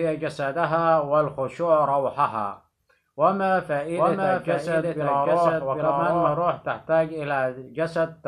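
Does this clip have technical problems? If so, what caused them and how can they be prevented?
Yes. From about 4.0 to 6.4 s there is a doubled audio track: a second, equally loud full-band copy trails by about 0.7 s, without decay or room colour, starting and stopping abruptly. On a waveform or spectrogram, every pattern reappears shifted right by that fixed gap. The likely cause is a slower second capture path or misaligned duplicate edit. To prevent it, route each source through one path and check edits for stacked duplicate regions.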